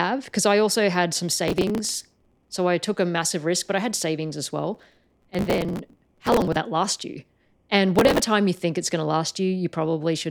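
Processor overload crackle occurs three times: 1.48–2.55 s after "I also had some", 4.75–6.56 s after "I had savings as", and 7.96–8.27 s before "you think it's". Tiny buffers of roughly a millisecond and a half miss their deadlines in long runs and are skipped. The resulting hard-edged gaps stack into gritty crackle over the speech.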